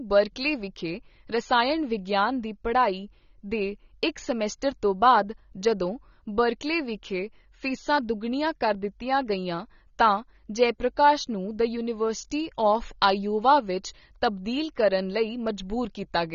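From start to finish the speech sounds dull and smeared, with nothing above 7 kHz. Sibilants come out fizzy and thin, and sustained vowels carry a warbling texture, a plainly audible coloration that never lets up. The likely cause is AAC compression at a low bitrate, which fits roughly 24 kbps. To save data the encoder has pulled its cut-off down and quantised the remaining bands so coarsely that detail drops out or turns to substitute noise.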